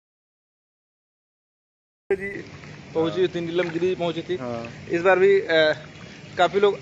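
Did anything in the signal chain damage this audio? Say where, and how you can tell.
Yes. An audio dropout to silence runs from the start to 2.1 s: plain silence with no room tone, likely input lost at the driver stage.

At 2.34 s the input likely switched to a poorer device: nothing above 7.6 kHz, the level shifts by about 5 dB, and a new noise floor sits roughly 45 dB down.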